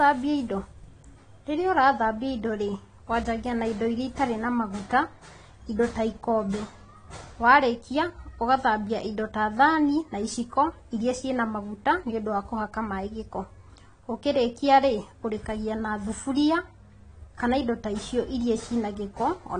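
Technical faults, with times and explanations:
Throughout: AAC compression. Nothing is present above 10 kHz, so the speech sounds dull and airless, and sibilants come out smeared and fizzy with a warble on held sounds. The likely cause is AAC-LC coding at a low bitrate, consistent with about 32 kbps, where the encoder drops the top band and coarsely quantises what remains. A spectrogram shows a hard ceiling at 10 kHz, while the waveform shows little sign of it.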